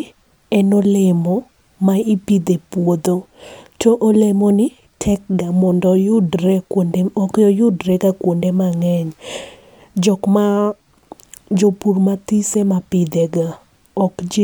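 A speech recording with nothing technically wrong in it.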